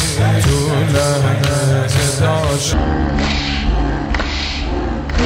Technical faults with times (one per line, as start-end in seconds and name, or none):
2.73-5.26 stereo read as mono